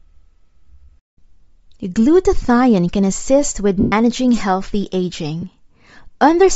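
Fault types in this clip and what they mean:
Bluetooth LC3 compression: The speech has a plainly grainy, breathy top end throughout. This is likely low-bitrate LC3 coding filling the upper band with noise.
Lost LE Audio frames: After "can assist with" at 3.8 s, the decoder repeats the last spectrum, smearing 120 ms into noise. A 20 ms smear follows at 5.41 s.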